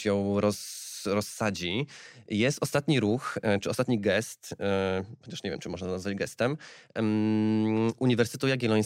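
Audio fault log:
Nothing to log here: the speech comes through without any technical fault to point to.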